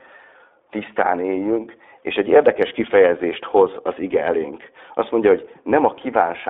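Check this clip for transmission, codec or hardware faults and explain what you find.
The speech passes through the iLBC codec for the whole clip. The line is band-limited to roughly 300 Hz to 3.6 kHz, and each short frame's excitation is coded independently, consistent with 20 ms frames at about 15.2 kbps. The result is muffled, plainly rough and synthetic speech.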